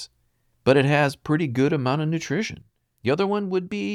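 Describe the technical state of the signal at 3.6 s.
At 3.6 s the signal is inside a sudden gain jump that runs from 2.62 s, right after "good amount of nutrition", to the end of the clip. Speech and background noise both sit about 5 dB lower, dropping together in one step, likely a digital gain change applied without a ramp.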